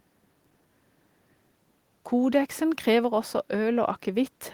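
No technical faults are audible.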